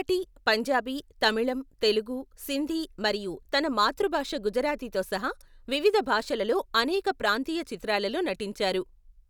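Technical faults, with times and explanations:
Listening through this speech recording, nothing stood out as a technical fault.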